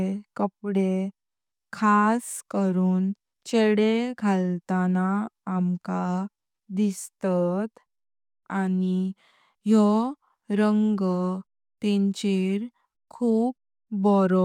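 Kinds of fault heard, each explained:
No technical faults can be heard anywhere in this speech recording.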